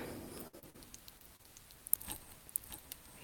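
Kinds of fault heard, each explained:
Doubled audio track: the whole clip has a second, clean copy roughly 5 dB quieter trailing about 0.7 s behind, likely an extra capture path or misaligned edit.
Burst of packet loss: at 0.47 s the last sound is continued and fades before jumping ahead, since about 60 ms of packets never arrived.
Short concealed packet loss: brief smears and wobbles at 0.59, 0.70, 1.18, 1.36 and 1.43 s, where the receiver patched tiny gaps by extending the previous sound.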